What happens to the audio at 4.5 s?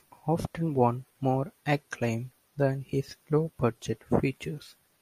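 Nothing goes wrong at 4.5 s; the speech carries on intact through that moment, with no dropout, click or distortion.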